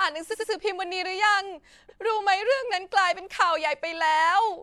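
Repeated frames: a block of about 93 ms, consistent with two compressed frames, was sent again at 0.30–0.49 s (twice, adding 186 ms) and at 1.88–1.98 s (once), causing a stutter.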